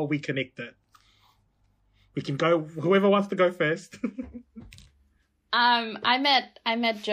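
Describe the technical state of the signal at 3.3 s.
At 3.3 s the speech shows plainly audible watery, swirling artefacts that last throughout the clip, likely MP3 compression at a low bitrate around 64 kbps. Weak frequency lines flicker frame to frame, unlike a plain low-pass filter's steady dullness.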